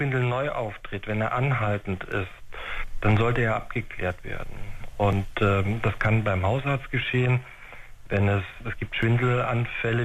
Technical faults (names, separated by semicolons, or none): overlapping chunks